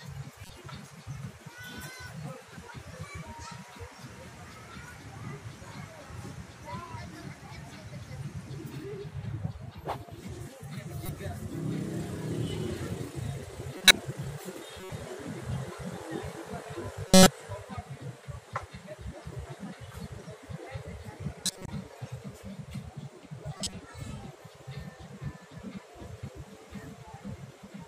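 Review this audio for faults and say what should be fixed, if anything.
Seven brief chirps and bursts of noise break into the sound at 0.43–0.50 s, 11.06–11.09 s, 13.78–13.91 s, 14.80–14.90 s, 17.08–17.27 s, 21.46–21.68 s and 23.52–23.73 s. The loudest, at 13.8 s and 17.1 s, reach about −10 dBFS, and the quietest sit near about −30 dBFS. This is a corrupt frame decoded: bit errors hit a few compressed frames each time, from a couple up to roughly seven, and the decoder played them anyway, placing energy at the wrong frequencies for the length of the damage. Checking each frame for errors and concealing damaged frames instead of decoding them would prevent this.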